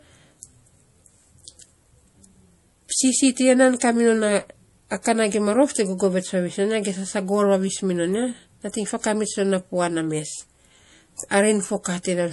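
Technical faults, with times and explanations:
Throughout, MP3 compression: the speech has nothing above about 11.4 kHz and plainly audible codec damage, a watery, swirling texture with metallic chirps on s sounds and softened consonant attacks. This is likely a low-bitrate MP3 encode, roughly what 48 kbps would give, where weak frequency lines drop in and out between frames. A simple low-pass filter would dull the treble without that frame-to-frame shimmer.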